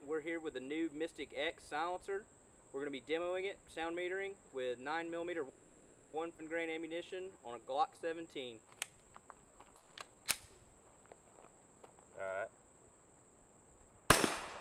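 At 5.49 s the audio stalls in a call audio freeze that lasts until 6.15 s. The last sound is stretched into a fading buzz for about 0.64 s, then playback resumes exactly where it stopped. The likely cause is delayed packets that left the jitter buffer empty. Nothing is lost, but a gap has been inserted.

Shortly after, between 6.37 and 6.40 s, comes a skip ahead. Roughly 0.4 s of audio is discarded. The two sides are joined almost directly, leaving an abrupt jump forward with only a 10 ms bridge.

From 6.67 to 10.21 s a jitter buffer slow-down plays the audio at about 88% speed. Repeated pitch periods and pause fragments add about 420 ms in total. Pitch stays unchanged, so sounds come across as drawn out.

Inside that slowed stretch, from 9.77 to 9.99 s, a long network dropout replaces 200 ms of audio with a concealment buzz that decays but never reaches silence. The likely cause is packets that never arrived. 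When sound returns, the lost 200 ms is simply absent.

From 11.46 to 14.01 s a jitter buffer speed-up runs the audio at about 113%. Short pitch-period pieces are cut out repeatedly to trim the accumulated delay, roughly 0.4 s in all. Pitch holds steady while the pacing sounds noticeably hurried.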